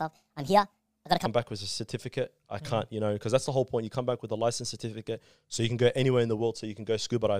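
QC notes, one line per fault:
0.00–1.26 s, section at the wrong speed: the opening speech sounds high and hurried, pitched up by roughly seven semitones. It plays at 1.44 times its recorded rate, likely from being fitted to the wrong clock, so speed and pitch rise together.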